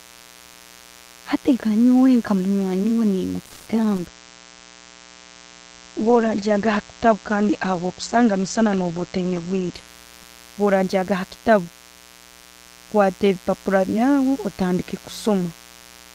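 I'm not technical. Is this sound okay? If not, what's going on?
No. A steady, raspy mains buzz runs under the whole recording. It comes from electrical interference tied to the 60 Hz power supply, which adds a sharp, repeating hum with many overtones. It sits well below the speech but stays audible throughout.

From 3.45 to 3.68 s there is a call audio freeze. The sound stretches into a short fading buzz, and then the speech carries on from where it stopped. The likely cause is that the call's data arrived late, putting about 0.21 s of pause into the speech without losing any of it.

At 3.96 s there is a short concealed packet loss. A few hundredths of a second of speech never arrived, and the receiver filled the hole by extending the previous sound. It is heard as a brief smear or wobble, and a small piece of speech is gone.

From 4.08 to 10.46 s there is a call bitrate drop. The connection weakened, so the call was sent with far less detail. 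The speech turns rougher and duller, with everything above about 8 kHz removed, until quality returns near 10.5 s.

There are three jitter buffer speed-ups: 9.00 to 9.63 s, 10.60 to 11.66 s, and 12.94 to 13.87 s. The receiver had built up extra delay and trimmed tiny slices out of the speech to catch up. Each stretch runs about 5 to 9 percent faster at unchanged pitch and sounds slightly hurried.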